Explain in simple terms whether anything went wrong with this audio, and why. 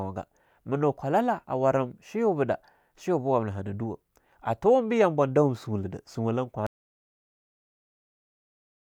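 Something did go wrong. At about 6.67 s the speech cuts off abruptly and the clip stays completely silent until the end. This is an audio dropout to silence: the input was likely lost, perhaps through a disconnected microphone or a failed link, while the recording carried on writing nothing. Unlike a natural pause, the gap has no faint background hum or room sound at all, and it breaks in mid-flow, so whatever came next is missing.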